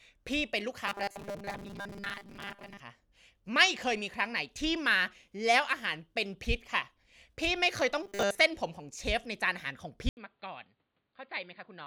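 From 0.87 to 2.80 s, and again from 8.03 to 8.39 s, the speech turns into robotic sound from repeated short buffers. Both stretches carry a rigid, metallic buzz at 200 Hz that only loosely tracks the speech. The likely cause is audio arriving too seldom. The software seems to repeat a 5 ms slice to fill the gaps, which fixes the pitch at 200 Hz. Most of the real audio in these stretches is skipped.

At 10.09 s the input appears switched to a poorer device, and the change lasts to the end. An 80 ms silence marks the switch. After it, the band is narrower, so the sound is dull and boxy. The level drops by about 10 dB. A new, faint background noise appears, roughly 45 dB under the speech. This is likely a change to another microphone or a headset's call profile.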